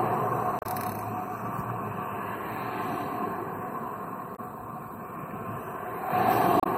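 Three brief glitches cut through the audio, at 0.59 to 0.66 s, 4.33 to 4.40 s and 6.60 to 6.67 s, each lasting about 70 ms. These are damaged data in a compressed stream. A stretch of the coded bytes was lost or overwritten, so the decoder misreads the affected frames, falls out of sync and hunts for the next valid frame header. Each one is heard as a chirp, squawk, click or short hole in the signal.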